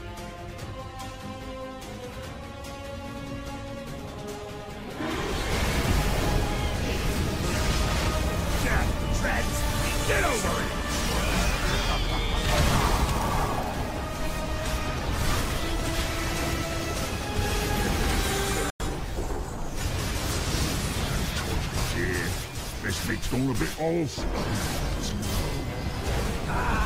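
At 18.70 s the audio fades out in about 3 ms and stays silent until 18.80 s: a digital broadcast dropout. The receiver stopped getting valid frames, muted, and resumed once clean data returned. The roughly 96 ms of missing programme fits about three lost frames, and that material is gone rather than delayed. On a waveform it shows as a flat-line gap with a very short taper; a spectrogram shows a narrow blank vertical band across all frequencies.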